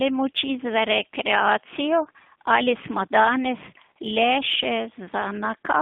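From start to finish the speech carries G.729 codec damage: an 8 kbit/s model rebuilds each frame from a filter and a few pulses. The line band is cut to 150 Hz to 3.5 kHz, so everything sounds thin, rough and slightly synthetic.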